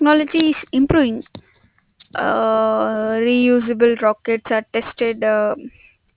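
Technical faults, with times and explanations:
Throughout, aliasing: the speech was brought down to a lower sample rate, which fits a drop to 8 kHz, without an anti-alias filter. Content above the 4 kHz fold reflects back as false, unrelated tones around 25 dB below the speech, making sibilants gritty and metallic.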